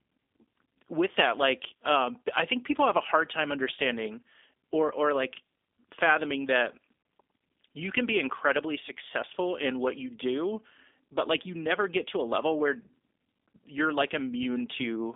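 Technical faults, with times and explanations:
Throughout, G.729 codec: the speech has a clearly audible rough, slightly synthetic texture, consistent with G.729A coding at around 8 kbit/s. This codec does not send the waveform. It sends a vocal tract filter, a pitch predictor and a handful of pulses for each frame, and the decoder rebuilds the signal from those parameters. The line band runs from 250 Hz to 3.6 kHz, with nothing above 3.7 kHz, so the audio sounds thin and boxy.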